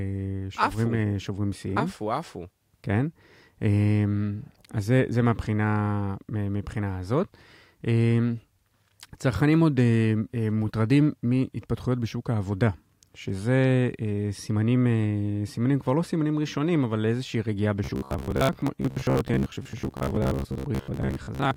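From 17.84 to 21.56 s there's robotic sound from repeated short buffers: a metallic 66.8 Hz buzz, likely a 15 ms chunk replaying over half the speech.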